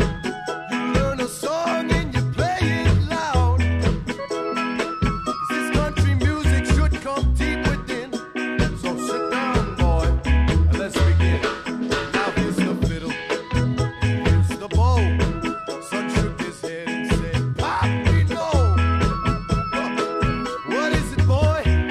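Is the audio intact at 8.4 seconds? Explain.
Yes, the audio is intact at 8.4 seconds, with nothing there that breaks the continuity of the signal.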